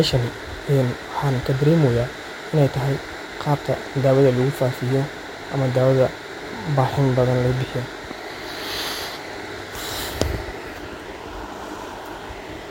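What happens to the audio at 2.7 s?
Nothing goes wrong at 2.7 s; the speech carries on intact through that moment, with no dropout, click or distortion.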